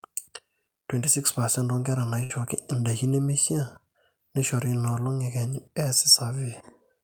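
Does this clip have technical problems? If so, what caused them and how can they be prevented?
Yes. From 2.23 to 2.32 s there is a burst of packet loss: a run of audio packets never arrived in time, so the receiver stretched the last sound it had for about 63 ms and faded it out, and about 60 ms of speech is skipped when playback resumes. The held, decaying buzz or hiss, rather than dead silence or a sharp click, marks this as concealed network loss and not a plain dropout. A larger jitter buffer, forward error correction and a steadier network connection would prevent it.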